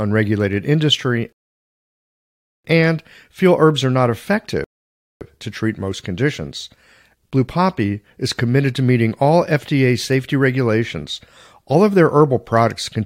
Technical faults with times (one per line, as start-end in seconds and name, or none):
1.33-2.64 rebuffering stall
4.64-5.21 rebuffering stall